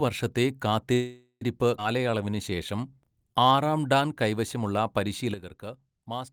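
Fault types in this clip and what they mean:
Call audio freeze: From 0.93 to 1.43 s the speech stalls. The last sound is stretched into a fading buzz that falls silent for about the final 80 ms. This is likely packets held up in transit, leaving the jitter buffer empty. When the audio resumes, it carries on exactly where it stopped. Nothing is lost. Instead, about 0.48 s of filler is inserted, and everything after it plays that much later.
Skip ahead: Between 1.77 and 1.80 s the playback jumps forward. Only a tiny 8 ms patch covers the seam. Roughly a fifth of a second of speech is simply gone, and the two sides are joined almost directly. The audio was dropped while later speech was already waiting, either in transit or when the buffer overflowed. This cuts the accumulated delay by roughly 150 ms.
Jitter buffer slow-down: From 1.98 to 3.70 s the speech runs at 90 percent speed. The pitch stays the same. 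Sounds are drawn out, and there may be a faint warble. The receiver is rebuilding its reserve. It does this by repeating single pitch periods and small pieces of pauses many times over. In total about 180 ms is added across this stretch.
Sudden gain jump: At 5.34 s the level drops by about 10 dB in one step and stays down to the end. The speech and the background noise fall together, and the change may come with a click. The abrupt step points to a digital gain change applied without any ramp. The likely cause is a setting change or a bit shift taking effect between one sample and the next.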